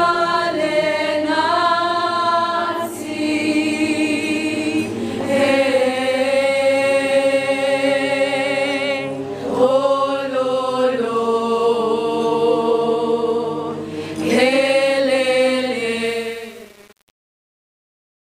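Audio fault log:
16.05–18.26 s, truncation distortion on the fade: the fade-out is grainy as it sinks toward silence and turns to blocky steps. That fits a gain stage keeping roughly 7 bits with no dither.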